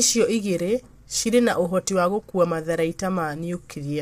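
From start to end the speech sounds rough and grainy, with noise filling the gaps between pitch harmonics and a thin, artificial top band, likely low-delay AAC compression (AAC-ELD) at around 32 kbps. Unlike ordinary AAC smearing, the roughness comes from coarse quantization at the low bitrate.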